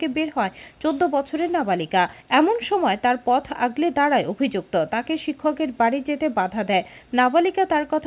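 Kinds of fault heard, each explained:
No faults are heard anywhere in this audio.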